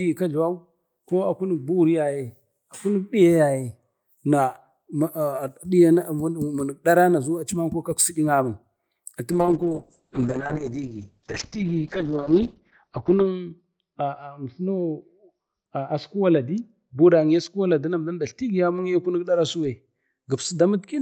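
At 9.32 s a call bitrate drop cuts the encoder from 48 to 7 kbps, narrowing bandwidth from 20 kHz to 6 kHz; the speech turns muffled and rough through the end.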